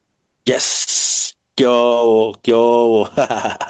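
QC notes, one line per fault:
Throughout: gain pumping. The level of this speech rides up and down by roughly 15 dB, so loud and quiet passages sit squashed close together. The likely cause is input gain set far too high for the microphone, with a fast limiter or compressor clamping down on every peak and releasing in the gaps. The call path's coding noise and the top end stopping near 8 kHz sit underneath this.
0.83–0.90 s and 1.87–1.94 s: short concealed packet loss. Each spot has a brief smear or wobble where the sound carries on unnaturally before blending back, and a short consonant could be lost inside it. About 40 ms of audio failed to reach the decoder in time each time, and the receiver bridged the hole by extending the preceding sound, roughly 32 ms and 41 ms of invented fill, then crossfaded back into the real signal.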